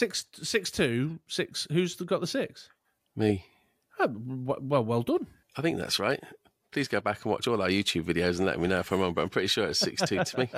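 No dropouts, glitches, distortion or other defects can be heard anywhere in the speech recording.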